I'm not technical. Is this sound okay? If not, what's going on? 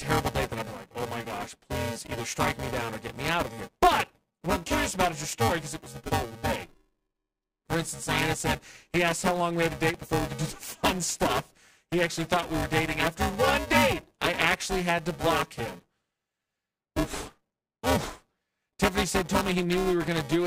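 No. Throughout the speech there is buffer tearing: a robotic buzz at about 345 Hz, present only while someone talks. The buffer playing the audio and the program filling it have fallen out of step, so roughly two-fifths of each tiny chunk replays audio from a few milliseconds earlier. That fits a 128-sample buffer.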